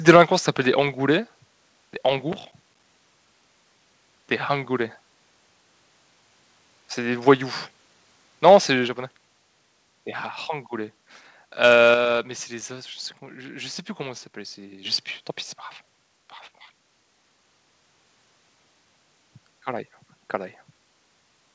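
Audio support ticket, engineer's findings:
Microphone overload, 0.08 to 0.22 s, right before "ça s'appelle des": harsh crackly edge on the opening peaks, which run about 4 dB past full scale with a few percent of samples flattened. Likely mic input gain set too hot, hitting the converter ceiling.

Microphone volume stepped down at 0.16 s, mid-overload, about 4 dB; again at 8.88 s, about 4 dB; and at 11.94 s, about 5 dB, just before "mais c'est les as". Sound and background drop together in one step. Likely the call software's auto gain backing off a loud mic.

Processor overload crackle, 2.33 to 2.83 s: gritty tearing over the sound for half a second, made of tiny hard-edged silent dropouts. Fits around fifteen missed deadlines on roughly 5 ms buffers while the CPU was swamped.

Microphone volume stepped up at 14.85 s, just before "sais plus tant pis": sound and room jump about 7 dB in a single step. 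Call software's auto gain deciding the mic was too quiet and pushing input volume up.

The call path itself sounds like wideband G.722, with nothing above 8 kHz, as expected for that codec.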